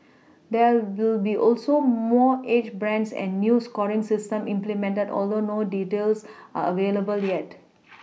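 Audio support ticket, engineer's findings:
No faults found on the speech clip; nothing to attribute to any component.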